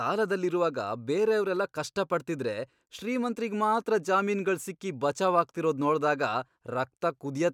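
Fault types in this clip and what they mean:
No faults can be heard in this recording.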